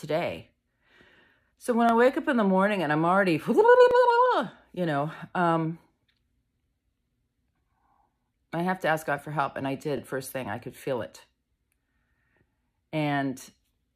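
Overlapping chunks at 1.89–1.91 s, 3.91–3.93 s and 9.98–10.00 s: the audio was handled in 2-second chunks, each starting about 21 ms before the previous one ended. That sliver plays twice at each join and is heard as a brief click or stutter.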